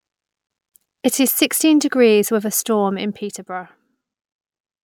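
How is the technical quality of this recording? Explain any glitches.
No glitches or technical faults can be heard here.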